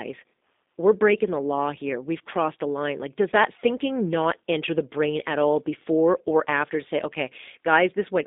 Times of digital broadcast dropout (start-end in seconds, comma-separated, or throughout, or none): none